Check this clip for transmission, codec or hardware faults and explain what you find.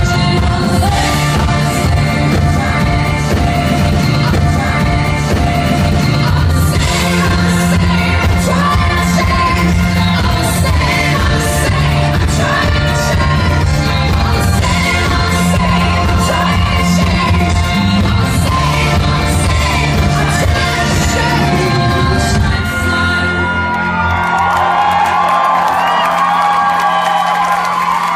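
One transmission fault is audible: a stream segment repeated between 4.32 and 6.32 s. The player fetched or queued the same chunk twice, so about 2.0 s of audio plays again after a small blip at the jump back. On the waveform and spectrogram, the same two-second pattern appears twice in a row, with a hard seam where it restarts.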